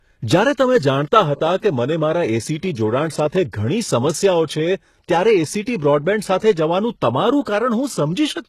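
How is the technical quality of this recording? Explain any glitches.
The recording is heavily compressed throughout, and two attacks are smeared by pre-echo.

The damage spans the whole clip. The treble sounds synthetic. S sounds come out gritty and lispy, and nothing is present above 12.3 kHz. The likely cause is HE-AAC compression at a very low bitrate, around 16 kbps. That codec keeps only the lower spectrum. It fakes the upper bands by copying lower ones upward and shaping them roughly. The copied harmonics do not line up with the real ones, so the treble sounds metallic.

Pre-echo occurs at 1.57 to 1.62 s and again at 3.30 to 3.33 s. The first smear lasts 51 ms and the second 29 ms. A short hiss rises just before each sharp onset, and the attack itself sounds softened. The codec spreads its coding noise across a whole block. When a loud attack lands late in that block, noise sized for the attack leaks into the quiet moment before it.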